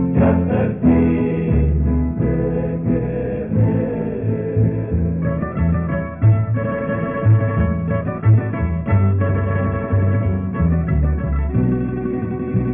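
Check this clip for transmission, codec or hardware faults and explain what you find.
Nothing stood out as a fault on listening to this clip.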